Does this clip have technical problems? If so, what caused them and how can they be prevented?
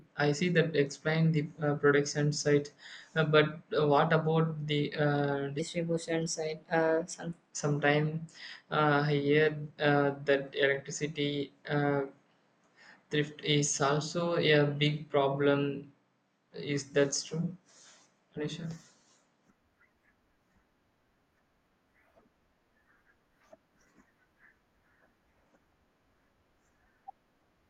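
Yes. From 5.59 s to 7.51 s, right after "what about the uh" and ending before "sometime uh I", there is a section at the wrong speed: the speech runs about 1.14 times too fast, so it sounds hurried and sits roughly two semitones higher. The likely cause is that this stretch was played back or resampled against the wrong clock rate. To prevent it, keep sample rates and clock settings consistent across every device and editing step.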